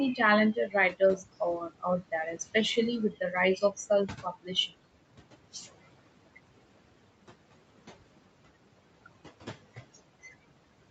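Throughout the clip, the background drops away between phrases and swells back up under the speech. These are noise suppressor artifacts. The suppressor judges some bands to be steady noise and pulls them down by about 21 dB, frame by frame, so the noise floor pumps along with the talking.

From 0.54 to 4.73 s, speech cut by the noise suppressor leaves stretches sounding swallowed or faint. This happens at 0.54 to 1.42 s and 1.58 to 2.55 s, each dipping by up to about 19 dB. Shorter dips of about 12 and 14 dB follow at 3.10 to 3.34 s and 3.56 to 3.90 s. The deepest cut, about 21 dB, comes at 4.07 to 4.73 s. Each time, the suppressor mistook soft speech for noise and lowered it along with the room sound.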